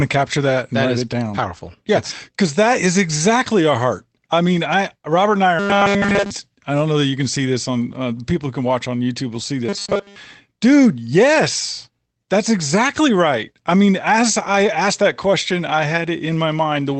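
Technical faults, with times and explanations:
5.59–6.31 s and 9.69–10.17 s, robotic sound from repeated short buffers: audio likely arrived too slowly, so the player looped a tiny slice instead of real sound. Between "and I are" and "I don't know that" nearly everything is repeated; after "will see", before "dude yes that's exactly", most is. A rigid 200 Hz buzz results, fitting a 5 ms buffer.
8.65–8.71 s, lost packet rebuilt from error correction: just after "uh people who can", what sounds like two lost packets were replaced by low-bitrate backup copies carried in later packets, covering about 40 ms. There is no gap, but that stretch turns briefly rougher and noisier than its surroundings.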